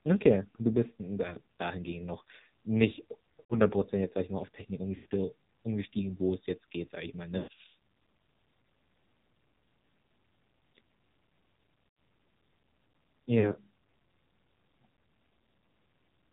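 Speech carried over the AMR narrowband mobile codec with heavy damage: nothing above 4 kHz, and a buzzy, synthetic tone that points to a low mode around 6 kbps. Lost AMR speech frames make the sound smear and fade briefly as the decoder stretches the last good frame at 3.40–3.60 s after "dahingehend noch nicht", 4.96–5.06 s before "umgestiegen wo es jetzt", 7.38–7.59 s after "geht sage ich mal", and 11.88–11.96 s.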